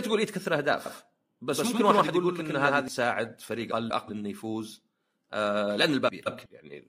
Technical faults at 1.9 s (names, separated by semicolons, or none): doubled audio track